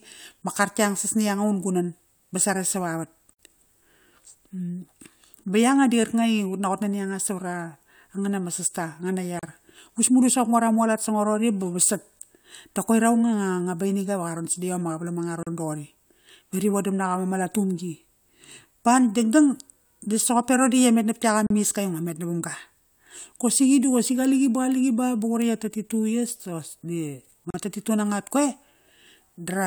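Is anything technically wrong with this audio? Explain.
Yes, there are gaps at the joins of encoded pieces. The speech briefly drops out at 3.33 s for about 58 ms, then at 9.39, 15.43, 21.47 and 27.50 s for about 37 ms each, so roughly every 6 s. Someone likely encoded the audio in chunks and stuck them together without trimming, leaving each encoder run's leading delay and last-frame padding in place. You hear short silences with smeared edges, and the speech picks up right where it stopped.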